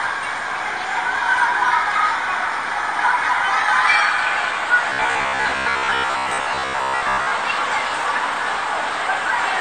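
From 4.90 to 7.33 s, new audio likely arrived too seldom, so short buffers of roughly 15 ms were replayed in place of the skipped material. This robotic sound from repeated short buffers overlays most of that stretch with a rigid, metallic 66.8 Hz buzz.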